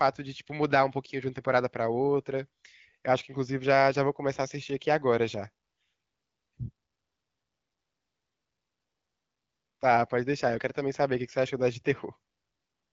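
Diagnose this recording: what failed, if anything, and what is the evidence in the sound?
Nothing failed in this recording, and the sound carries no evidence of any fault.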